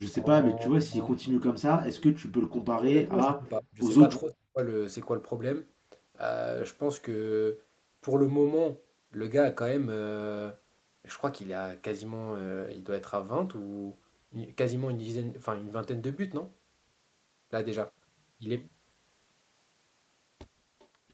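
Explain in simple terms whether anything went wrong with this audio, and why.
Speech suppressed in double talk happens three times early on: briefly at 0.2 s, then from 0.51 to 3.81 s, and again from 4.23 to 4.58 s. The voice dips noticeably in the first instance, then drops away almost completely in the longer two. The likely cause is that both people were talking at once, and the call's echo canceller couldn't tell this voice apart from the other side's voice coming out of its own loudspeaker, so it turned everything down.

Echo leak appears near the end, at 20.79 to 20.87 s, as a very faint, brief copy of the voice arriving about 0.4 seconds late. This likely happened because one side was using a loudspeaker, and its echo canceller didn't fully remove what its microphone picked up from that speaker. The small leftover scrap was sent back down the line and heard as a delayed echo.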